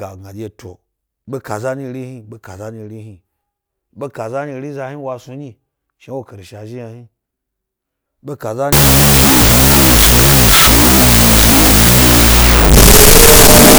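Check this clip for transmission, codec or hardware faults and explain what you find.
One fault appears, at the end of the speech. Wrong sample width from 8.73 s to 13.78 s: 16-bit samples read as unsigned 8-bit bytes, so the speech sinks under loud noise, playing at half speed an octave low.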